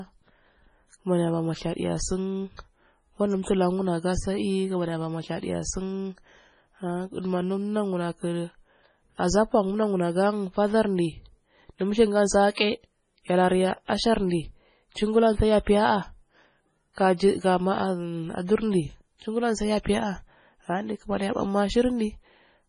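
From start to finish the speech has a watery, swirly quality, and everything above 10.5 kHz is simply gone, so the top end feels dull and boxed in. That's most likely heavy MP3 compression. The encoder was starved of bits, which fits a very low bitrate around 24 kbps. It chopped the treble at a fixed point and kept dropping weaker frequency components in and out between frames, and that flickering is what gives the speech its swirl.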